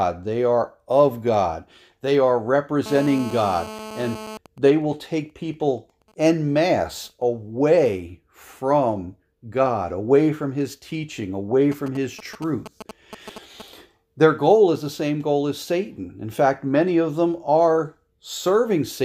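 From 2.86 to 4.37 s, GSM phone buzz from a nearby handset in a call is rectified into a hard, raspy 217 Hz drone about 13 dB below the signal. It shows as a comb of evenly spaced harmonic lines. GSM signalling bursts follow from 4.46 to 7.22 s as the caller falls silent, faint at around 30 dB down, and return louder, around 15 dB down, from 11.72 to 13.62 s. They are heard first as even ticks with a longer buzz twice a second, then as a galloping dit-dit-dit of short buzzes, and appear as clustered vertical spikes in the waveform.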